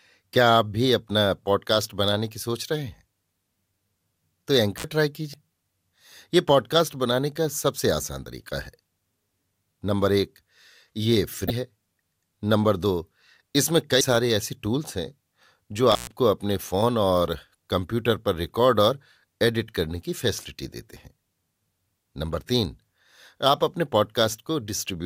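A speech recording with two kinds of fault. At 4.77 to 4.84 s and again at 15.91 to 16.11 s there is an intermittent contact: a loose cable or plug briefly loses its connection, opening the signal path for about 63 ms the first time and about 123 ms the second. Each time the speech drops out or breaks up, with crackle where the contact opens and closes and hiss left in the gap. Separately, there is damaged data in a compressed stream at 5.31 to 5.34 s and at 11.47 to 11.50 s. In both places part of the encoded data is wrong, so the decoder misreads or rejects those frames and has to hunt for the next valid frame header before it can continue. Each event is 34 ms long and is heard as a chirp, squawk, click or short hole.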